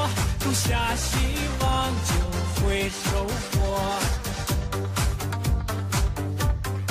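No technical faults are audible.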